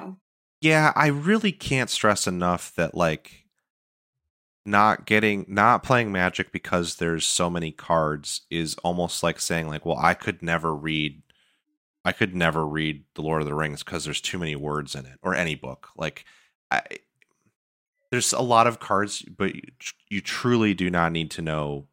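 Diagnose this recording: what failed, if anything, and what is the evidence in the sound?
Nothing failed in this recording, and the sound carries no evidence of a fault at any stage.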